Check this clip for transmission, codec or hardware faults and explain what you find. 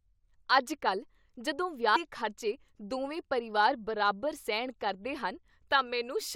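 One codec fault turns up in the speech. At 1.95 s, compressed frames are skipped: about seven frames never reach the output, consistent with a 21.3 ms frame length, so roughly 150 ms of audio vanishes. The speech jumps ahead at that join.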